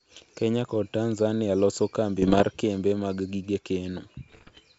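From about 2.22 to 2.45 s, and again from 4.28 to 4.60 s, the speech breaks into pops and gritty bursts with quick jumps in level. That's bit errors on an ADPCM link, at an error rate of roughly one or two percent, here over G.722 wideband coding, which is clear up to 7 kHz and sounds like the full 64 kbit/s mode. Each flipped bit throws off the decoder's step size and predictor, so the damage rings on for a few milliseconds instead of staying a single click.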